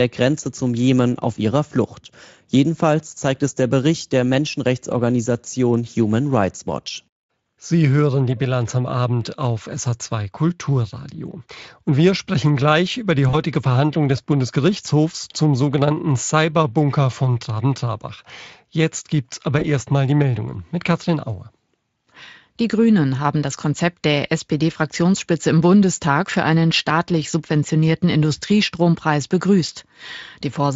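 At 13.29 to 13.35 s, after "sprechen gleich über die", and at 19.59 to 19.66 s, after "gibt's aber", VoIP packet loss concealed by the Speex speech codec stretches the last pitch into a brief fading buzzy tone or coloured noise. The gaps point to about 40 ms and 20 ms lost, and the voice stays weak or distorted for tens of milliseconds or more after packets return.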